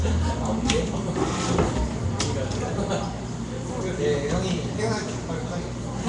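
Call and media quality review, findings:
Nellymoser compression throughout, whole clip. Rough hissy halo, smeared underwater character, nothing above 10.6 kHz. Likely Nellymoser Asao encoder, fits roughly 44 kbps. Fixed two bits per sample in 256-sample blocks; starved bands replaced by noise. Distinct from MP3 or AAC swirl: damage is hiss-filled and grainy rather than tonal warbling.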